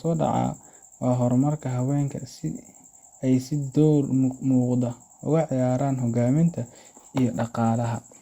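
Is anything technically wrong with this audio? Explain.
No, nothing technically wrong.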